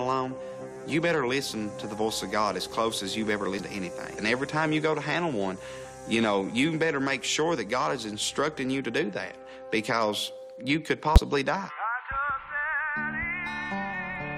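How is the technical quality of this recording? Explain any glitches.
Two short glitches mar the recording; both are damaged data in a compressed stream. At 3.59 s, and again from 11.16 to 11.18 s, corrupted bytes made the decoder misread its frames and lose sync until it found the next frame header, producing a brief chirp or blip in the sound.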